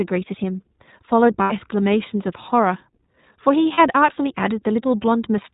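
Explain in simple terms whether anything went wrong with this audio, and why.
The speech passed through the iLBC codec, a narrowband phone codec that drops everything above 4 kHz, so the voice sounds muffled, slightly rough and synthetic. There are also lost iLBC frames: data went missing at 1.42–1.52 s and 3.74–3.80 s, and the decoder patched each gap with a held, buzzy vowel-like sound before the voice returned almost immediately.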